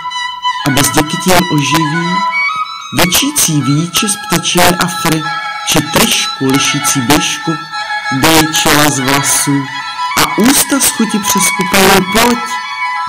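Integer overflow runs through the whole clip: the signal is driven about 8 dB past full scale, and roughly one or two percent of samples wrap to the opposite extreme. Unlike clipping's flattened, buzzy peaks, these wraps produce sudden violent cracks on peaks.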